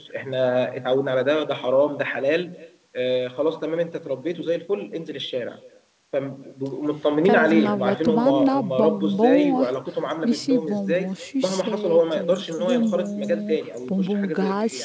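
All the way through the speech there's an echo with no canceller. The far end's loudspeaker feeds back into its mic, so every phrase returns roughly a third of a second later, about 22 dB down, faint and thin, over a call band that stops at 8 kHz.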